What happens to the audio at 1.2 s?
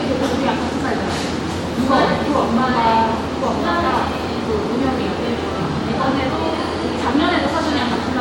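Nothing goes wrong at 1.2 s; the sound carries on intact through that moment, with no dropout, click or other fault.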